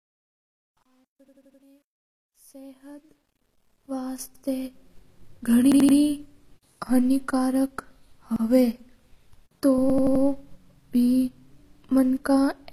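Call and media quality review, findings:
Gritty grain under the speech during the fade-in, 0 to 4.99 s, worst 0 to 3.08 s, clearing once the smooth fade-in reaches full level. Truncation distortion on a fade. Fade gain stage, requantised without dither to about 10 bits.

Speech stutters where one 85 ms slice plays again with a hard join, at 1.28–1.62 s (four extra plays), 4.35–4.44 s (one), 5.72–5.97 s (three), 8.36–8.45 s (one) and 9.90–10.24 s (four). Repeated buffer. Playout underrun resending the last buffer, consistent with a 4096-sample buffer. No audio dropped, so the speech after each stutter runs late.

Throughout, plainly audible coding damage. Sibilants gritty and lispy, treble artificial, nothing above 15 kHz. Likely HE-AAC compression, consistent with roughly 24 kbps. Spectral band replication rebuilds the treble from copied lower bands, so its harmonics do not line up.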